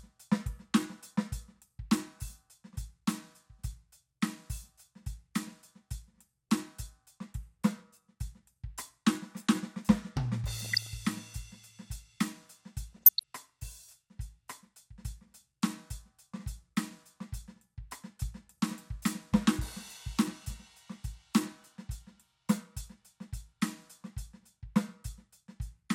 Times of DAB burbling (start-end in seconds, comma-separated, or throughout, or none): 10.57-10.87, 12.93-13.23